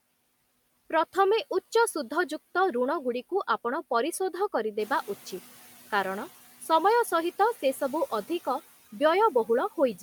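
From 4.79 to 5.4 s the noise suppressor is catching up. Its noise estimate lags about 610 ms behind room noise that jumps about 10 dB around 5 s, so the louder background passes under-reduced, then sinks by about 7 dB as the estimate settles.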